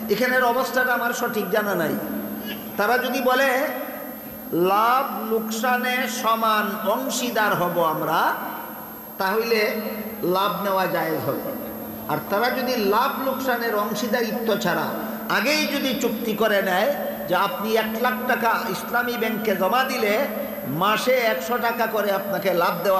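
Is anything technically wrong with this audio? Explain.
Yes, there's a switching supply whistle running through the whole clip. It's a thin, high tone wandering between about 12.0 and 12.9 kHz, sitting roughly 20 dB under the audio. A switching power supply somewhere in the chain is dropping into an audible burst mode or beating against another supply, and as its load shifts the pitch drifts around rather than holding still.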